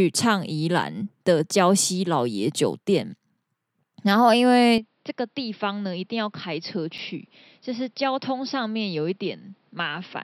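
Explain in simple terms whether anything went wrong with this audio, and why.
At 4.78 s the input was likely switched to a poorer device, another microphone or a headset's call mode. From then to the end, the speech sounds duller and quieter, with nothing above 5.6 kHz, a faint new background noise, and no gap at the switch.

At 6.98 s there is a block of digital silence: about 5 ms of samples were replaced by zeros. The sound drops straight to nothing and straight back with no fade, so the hole is heard as a small tick.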